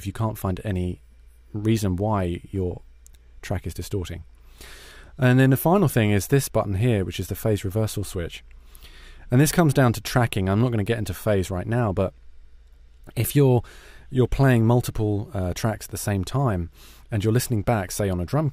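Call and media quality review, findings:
No audible faults found.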